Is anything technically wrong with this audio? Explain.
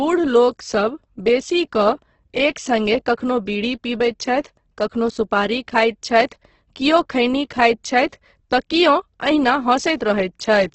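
Yes. Throughout the speech there is heavy Opus compression damage, likely from a very low bitrate around 12 kbps in music mode: bands short of bits get filled with folded or noisy content, so tones turn grainy and rough. On a spectrogram, everything stops sharply near 8.1 kHz, with smeared, speckled harmonics below.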